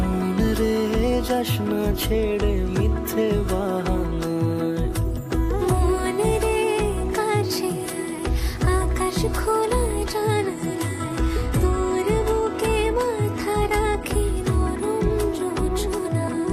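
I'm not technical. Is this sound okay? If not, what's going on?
No. From about 10.1 to 14.1 seconds there's an adaptive stream at a lower bitrate. The connection slowed, so the player switched to a smaller, lower-quality copy of the stream for those four seconds. The change is sudden, with no gap in the sound. During that stretch the crisp, bright top end disappears, with nothing left above about 12.3 kHz. The sound turns duller. Then full quality returns.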